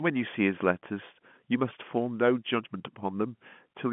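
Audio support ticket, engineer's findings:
No faults found in the speech clip. The G.711 telephone coding path is working as expected, with the sound held to a line band of about 150 Hz to 3.4 kHz.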